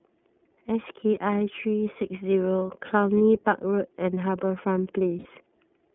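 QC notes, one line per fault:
throughout: iLBC codec. The speech sits in a narrow telephone band of about 150 Hz to 3.4 kHz. Each frame's excitation is coded separately, leaving a plainly audible rough, slightly synthetic edge. The coarseness fits the 13.33 kbps mode with 30 ms frames.
3.18 s and 5.19 to 5.26 s: lost iLBC frames. Two gaps, 30 ms and then 60 ms long, fit one and then two missing frames. The decoder repeats the last pitch cycle mixed with noise, so each gap sounds like a brief held, buzzy vowel. Normal speech returns almost immediately.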